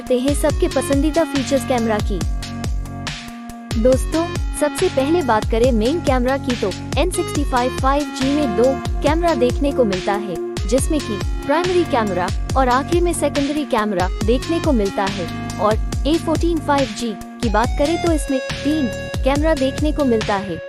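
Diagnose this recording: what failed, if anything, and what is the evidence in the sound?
Nothing failed in this recording, and the sound gives no evidence of a fault.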